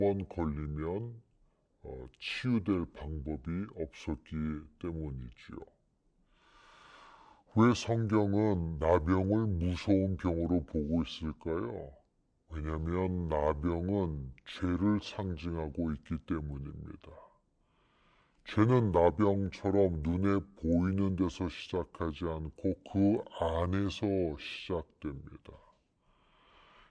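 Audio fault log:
throughout wrong sample rate: the speech runs at 0.689 times normal speed and sits 6.45 semitones lower, so it sounds slow, heavy and low. Speed and pitch fall together with no resampling, which fits 32 kHz material being played back at 22 kHz.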